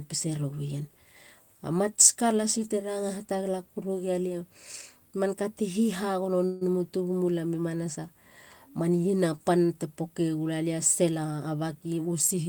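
At 6.45 s the speech stops and a short buzzing continuation of the last sound takes its place. It fades and lasts until 6.63 s, about 157 ms. This is a call audio freeze. Packets were most likely delayed in transit, so the jitter buffer ran dry. The receiver stretched the final sound to cover the wait. When the speech resumes, it picks up exactly where it broke off. Nothing is lost. The talker is now running 157 ms later than before.

From 11.11 s to 11.99 s the speech sounds rushed. This is a jitter buffer speed-up. The pitch stays put, but the pace rises to 119% of normal. The buffer was holding more audio than its target, likely because late packets had bunched up. To pull the delay back down, the receiver cut out many tiny pieces, each one or a few pitch periods long. In total it trimmed about 150 ms. The result is a brief, hurried stretch.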